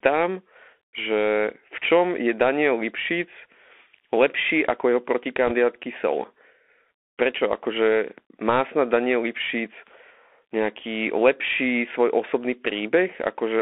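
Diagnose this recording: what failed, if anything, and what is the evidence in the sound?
The speech is confined to roughly 250 Hz to 3.5 kHz, with scratchy s sounds, grainy hiss beneath it and harsh distortion on loud, bright passages. This points to the codec stage: a Bluetooth CVSD headset codec, consistent with a 64 kbps one-bit link whose adaptive step cannot track fast, loud changes.

From 5.47 to 5.52 s a brief rushing crackle appears, with no hard clicks. This is a network-stage fault: bit errors on a Bluetooth voice link, at a rate of around 2 percent. Each flipped CVSD bit nudges the waveform slightly and then decays, which produces diffuse noise rather than spikes.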